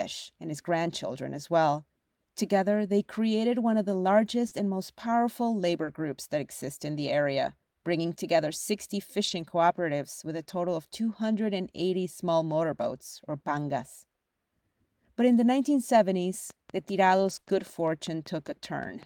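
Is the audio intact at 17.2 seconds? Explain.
No. A train of clicks runs from 16.50 to 19.06 s, regular pops at about 5 per second and about as loud as the speech, likely interference or a faulty connection. Lost packets rebuilt from error correction cover 17.11 to 17.37 s: about 140 ms was decoded from low-bitrate backup copies, so there is no gap, but the sound turns rougher and noisier there.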